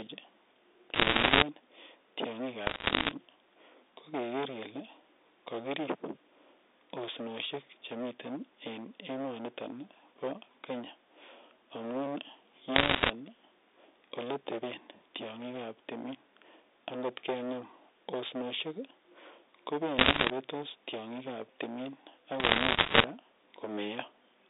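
From the start and through the whole recording the speech is hard clipped: it has been driven about 14 dB past what the chain can pass, so roughly a tenth of the samples are sheared off flat. The result is a constant harsh fuzz on every loud syllable, not just occasional crackle. On the waveform the peaks sit as flat plateaus pressed against a ceiling. On the spectrogram, energy spreads up toward the top of the telephone band above the voice harmonics.

Over that, there are five bursts of bit errors on a digital phone line: 0.94 to 1.42 s, 2.66 to 3.11 s, 12.76 to 13.1 s, 19.98 to 20.3 s and 22.4 to 23.04 s. Within each burst a few percent of bits are flipped, and each flip corrupts a single sample. The speech underneath stays intact, but it is peppered with sharp ticks and crackle wherever a sign or high bit is hit. The waveform shows isolated single-sample spikes. The spectrogram shows thin vertical lines across the whole band, which here stops near 3.7 kHz.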